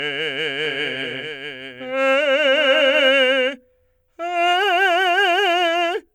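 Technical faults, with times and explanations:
0.65–3.09 s, doubled audio track: the music plays a second time about 0.7 s behind itself, roughly 5 dB quieter and with no decay or room colour. It switches on and off abruptly, likely from a slower second capture path or an edit holding two offset copies.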